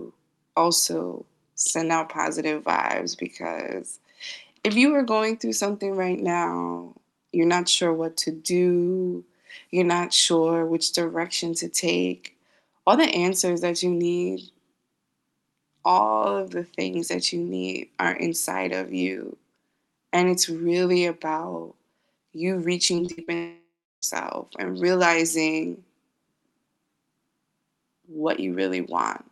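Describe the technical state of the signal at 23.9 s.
At 23.9 s the sound has collapsed into a fading buzz and then near-silence, from 23.35 to 24.04 s, before "and realizing" resumes; likely a long network dropout.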